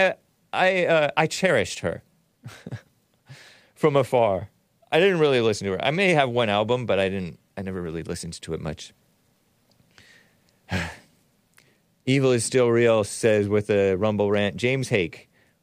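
No technical faults are audible.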